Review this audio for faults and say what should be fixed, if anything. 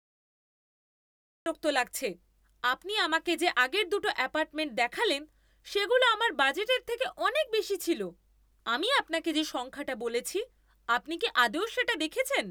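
A cut-off start: the first 1.46 s is digital silence, and at 1.46 s the speech begins abruptly mid-sound, because capture started late. The waveform shows a flat line jumping straight into the speech, and the spectrogram shows a hard vertical edge with no gradual onset. To prevent it, start recording or buffering before the speaker begins, leaving a short pre-roll.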